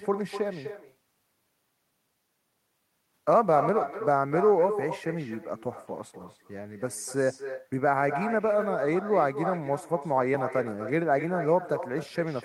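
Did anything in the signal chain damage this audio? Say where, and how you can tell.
Yes. Echo with no canceller runs through the whole speech clip, a call-processing failure. Every phrase returns roughly 300 ms later, about 9 dB quieter and thinner: the far end's loudspeaker feeds its microphone, and no echo canceller strips that copy before it travels back.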